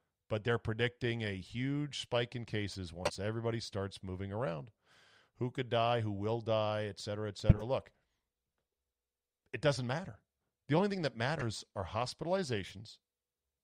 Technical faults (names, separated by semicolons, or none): corrupt frame decoded